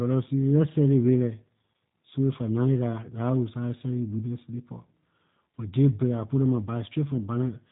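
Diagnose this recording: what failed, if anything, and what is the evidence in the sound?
The codec stage is at fault. The G.729 codec is audible from start to finish. Nothing above 4 kHz survives, so sibilants are dull and the top end is gone. The speech stays intelligible but sounds rough and slightly synthetic, and the damage is plain. The mechanism is parametric coding. Each 10 ms frame is rebuilt from a vocal tract filter, a pitch predictor and a few pulses, which fits an 8 kbit/s stream.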